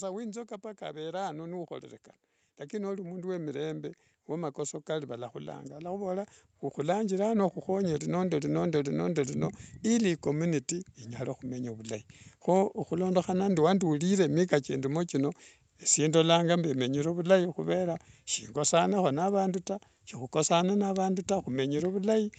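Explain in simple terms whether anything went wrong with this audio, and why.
The call's automatic gain rising was at fault: the system judged the input too quiet and slowly turned up its volume from 0.78 to 12.09 s. The voice and the background noise swell together over those eleven seconds, settling just before "kho ohulondohana".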